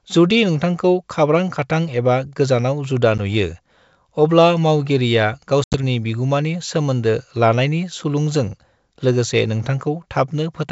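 Packet loss on an ADPCM call: a brief dropout at 3.18 s, then a longer broken gap after "अब्ला मावगिरिया" from 5.64 to 5.79 s (about ten packets). These show as hard-edged blank columns, and the speech returns slightly distorted.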